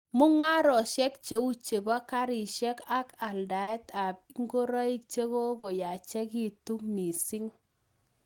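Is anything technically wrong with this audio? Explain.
Yes. The speech has short concealed packet loss, heard four times, at 0.39, 1.31, 3.63 and 5.59 s. Each time about 40 ms of audio failed to reach the decoder in time. The receiver covered the gap by extending the preceding sound, following its pitch where it was voiced and using shaped noise where it was not, then crossfaded back into real audio, each event spanning roughly 0.07 s. The result is a brief smear or wobble at each point.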